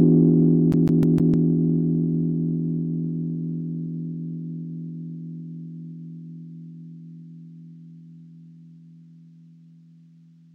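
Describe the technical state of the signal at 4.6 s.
At 4.6 s the signal is intact, with no dropout, distortion, glitch or other technical fault audible at that point.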